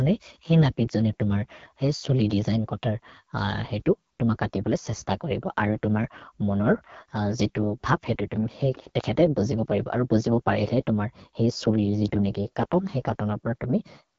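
From start to finish the speech carries AMR wideband (HD Voice) codec damage that is plainly audible. Vowels and voiced sounds turn rough and raspy, which points to one of the lowest AMR-WB modes, around 8.85 kbit/s, where the pulse-driven vocal tract model has too few bits. On a spectrogram, energy stops abruptly at about 7.1 kHz, and the band above roughly 6.4 kHz looks smeared and noise-like rather than harmonic.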